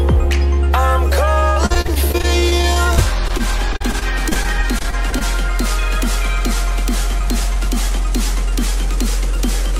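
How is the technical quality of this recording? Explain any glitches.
Repeated packet loss (robotic sound) runs from 1.39 to 5.22 s. Over thirty short gaps, the longest 55 ms, are each filled by extending the preceding sound, concealing about a fifth of that stretch. The result is choppy audio with fragments missing.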